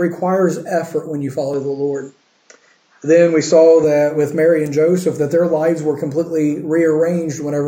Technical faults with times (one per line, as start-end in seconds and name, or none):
1.54-3.84 input switched to a poorer device